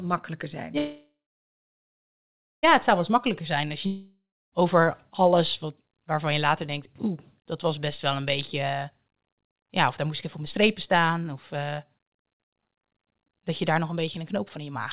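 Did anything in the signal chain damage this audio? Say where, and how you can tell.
Yes. After "makkelijker zijn", sound stalls at 0.78 s, fades to about 1.5 s of silence, then resumes at 2.65 s: likely a call audio freeze, with the jitter buffer starved at the network stage.

After "als je", a fading buzz or hiss into silence runs from 3.86 to 4.54 s, and about 0.66 s is skipped on return: likely a long network dropout.

After "ja of daar", from 10.05 to 14.87 s, the speech runs at 106% with unchanged pitch: a jitter buffer speed-up, trimming about a third of a second of pitch periods.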